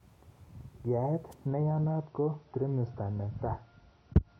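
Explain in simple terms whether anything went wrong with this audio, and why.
A wireless microphone noise hit occurs at 1.31 to 1.34 s, a brief swish of static over the speech. An analogue radio microphone sends its signal through the air, and when reflected copies of that signal arrive out of step they can cancel each other for a moment. The receiver then loses its grip and its own background hiss rises up. Here the dropout lasts only about three hundredths of a second.

An adaptive stream at a lower bitrate takes over from 1.47 s to the end. The streaming service sensed a slower connection and quietly switched to a smaller, cheaper version of the audio to avoid stalling. To save data, that version throws away the high frequencies, and nothing above 6.3 kHz survives. The speech suddenly turns dull and muffled, with no gap at the switch.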